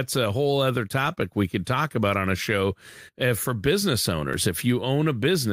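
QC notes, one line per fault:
No fault found.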